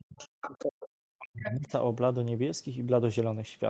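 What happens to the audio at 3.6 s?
Nothing goes wrong at 3.6 s: the speech carries on intact through that moment, with no dropout, glitch or distortion to be heard.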